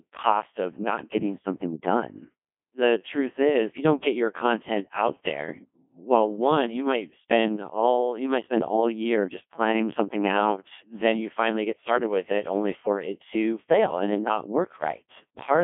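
Throughout, the speech sounds robotic and buzzy with nothing above 3.8 kHz: a Codec 2 vocoder resynthesises it from sine waves, consistent with its 1.2 kbit/s mode.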